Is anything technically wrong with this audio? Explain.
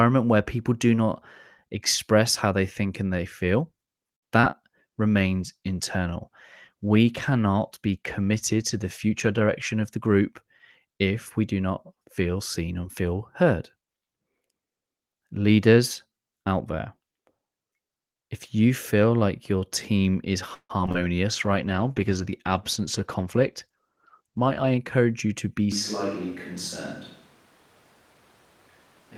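Yes. The speech suffers a cluster of network and recording faults: a stall and two small losses near 4.2 to 4.5 s, two periods of reduced bitrate, two jitter buffer speed-ups, a burst of robotic packet loss around 20.5 s, and a change in microphone sound for the last few seconds.

At 4.15 to 4.24 s there is a short stall from a late packet. A packet arrived after its playout time, so the jitter buffer ran dry and the receiver sustained the last sound for about 70 ms until the packet came in. Playback then resumed from the same point, so nothing is lost, but one sound is held unnaturally long and has a faint buzz or dip. On a spectrogram this shows as a brief flat stretch of frozen harmonics. The waveform shows a short run of near-identical repeated cycles.

Shortly afterwards come two instances of short concealed packet loss, at 4.40 to 4.45 s and 4.51 to 4.55 s. Each time about 20 ms of audio never reached the decoder. 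The receiver covered the hole by extending the preceding sound, then crossfaded back into the real signal. They are heard as tiny smears or wobbles in quick succession. A spectrogram shows slightly blurred or smoothed patches where detail should change. The waveform shows small splice points.

The call bitrate drop runs from 4.97 to 10.46 s, with the encoder going from 32 to 17 kbps for roughly four and a half seconds at the low rate. Told to spend far fewer bits, Opus quantises more coarsely and trims upper frequencies, so the speech turns rougher and duller. On a spectrogram the high band thins out or is cut off abruptly above a ceiling, with grainy, patchy texture below it. The change in the waveform is subtle.

Inside that stretch, from 9.06 to 9.98 s, there is a jitter buffer speed-up. Too much audio had accumulated in the buffer, so the receiver repeatedly removed short pitch-period chunks, about 70 ms in total, to cut the delay. 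The speech plays around 6% faster at unchanged pitch and sounds slightly hurried. A spectrogram shows compressed syllable timing with harmonics kept level. The waveform reveals many tiny, seamless cuts.

Between 20.54 and 20.96 s there is repeated packet loss, producing a robotic sound. Four gaps occurred close together, the longest 154 ms, and almost half the span is synthesised concealment. Each hole is patched by extrapolating the last sound before the next one hits. The result is choppy and robotic, with pieces missing. A spectrogram shows smeared, buzzy harmonic bands alternating with real speech, and the waveform shows a stuttering, periodic texture.

A second call bitrate drop follows from 21.31 to 24.74 s, this time from 32 down to 13 kbps for the whole stretch. At this lower rate the coding is even coarser, giving a watery, muffled quality. The spectrogram shows a lower high-frequency cutoff than in the first drop and sparser, blotchier energy throughout.

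The second jitter buffer speed-up overlaps it, from 22.80 to 25.05 s. The receiver shed about 150 ms of excess buffered audio by trimming pitch-period pieces many times over. The speech rushes along at about 6% above normal rate with its pitch intact. On a spectrogram, phonemes appear squeezed closer together. The waveform's periodic cycles are slightly fewer than expected, with no visible breaks.

From 25.72 s to the end the sound changes abruptly. It becomes hollow and roomy, about 5 dB quieter, with less low end, and background noise sits roughly 25 dB below the speech. This is likely a switch to a distant microphone, picking up more room reflection than the close one. A spectrogram shows weaker bass, smeared decay tails after syllables and a raised noise floor. The waveform steps down in amplitude at the switch.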